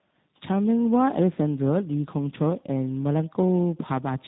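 Tandem speech coding throughout this short speech clip: passing through about three successive speech codecs, plausibly ending in a low-rate coder such as G.729A, compounds each stage's damage, leaving rough, muffled, warbly sound with nothing above 3.8 kHz.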